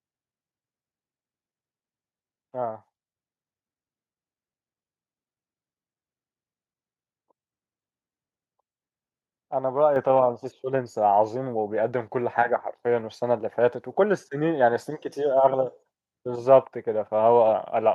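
At 9.96 s the microphone volume is stepped up: the call software judged the input too quiet and raised it in one move, about 5 dB. Speech and background noise jump together, unlike a talker moving closer, which would lift the voice but not the room.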